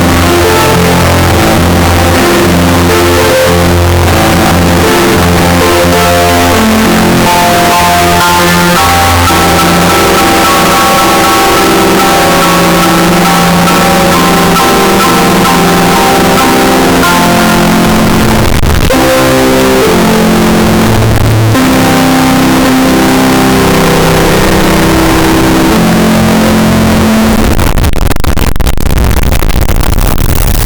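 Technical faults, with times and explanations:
throughout float read as integer: harsh, near-square music pinned at a high, almost fixed level, noise as loud as the tune; likely 32-bit float samples read as 32-bit integers.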